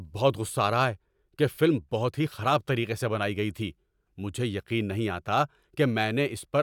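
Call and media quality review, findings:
Nothing to flag here; the speech recording came through without a single fault worth opening a ticket for.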